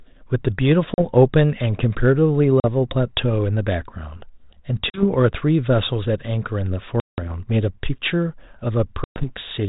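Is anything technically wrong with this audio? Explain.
Yes. There is packet loss on an ADPCM call, in five places: 0.94 to 1.00 s, 2.60 to 2.65 s, 4.90 to 5.04 s, 7.00 to 7.32 s, and 9.04 to 9.27 s. The first three drop 40 ms of speech each, which fits a couple of lost packets. The last two drop 180 ms and 120 ms. Each gap is filled with hard-edged silence. The decoder's predictor and step size then no longer match the sender's. So the speech returns with brief distortion. The G.726 telephone coding, which sounds like 32 kbit/s, adds only light grit.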